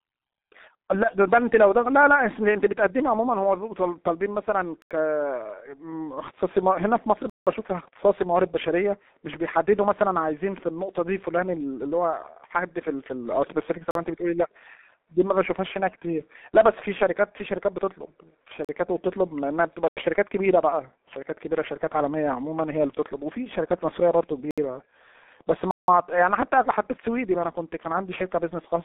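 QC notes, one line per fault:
Throughout: G.723.1 codec. The speech passes through a low-rate telephony codec running at 6.3 kbit/s. It models the voice in 30 ms frames, updates that model slowly, and discards everything outside a line band of roughly 200 Hz to 3.7 kHz, with nothing above 3.8 kHz. The damage is heavy: the sound is muffled and hoarse, consonants are smeared, and the low end is thin.
4.82, 7.30, 13.91, 18.65, 19.88, 24.51 and 25.71 s: block of digital silence. Each time, the output buffer was likely not filled in time and went out as zeros, cutting abruptly to dead silence and back. The holes last about 43, 68, 85 and 171 ms, with the 171 ms gaps at 7.30 and 25.71 s. The lengths point to whole buffers of 2048, 4096 and 8192 samples being lost.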